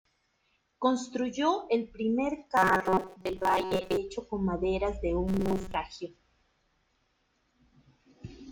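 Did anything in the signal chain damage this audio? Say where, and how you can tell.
Yes, at the driver or buffer stage. Robotic sound from repeated short buffers runs from 2.57 to 3.97 s, after "el primer", and from 5.28 to 5.76 s, after "con maderas de". Both carry a fixed 188 Hz buzz. That fits a looped block of about 5.3 ms, likely from late buffers.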